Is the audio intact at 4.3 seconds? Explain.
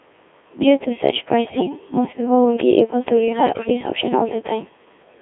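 No, 4.3 seconds is inside the Codec 2 vocoder damage that runs through the whole speech clip. This codec doesn't keep the waveform. It sends pitch, voicing, energy and a rough spectral envelope, and the decoder rebuilds the voice from sine waves. Here it sounds heavily robotic and buzzy, squeezed into a narrow band from about 250 Hz to 3.5 kHz, at a very low rate around 1.6 kbit/s.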